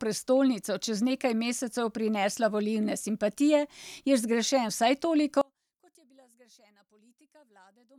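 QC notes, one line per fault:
5.41–7.98 s, one channel inverted: one stereo channel likely has reversed polarity, so summing to mono cancels the centred speech, leaving it about 35 dB quieter.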